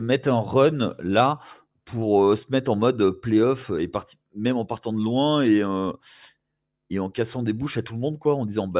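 No technical faults can be heard anywhere in this speech clip. There is nothing to place in time order.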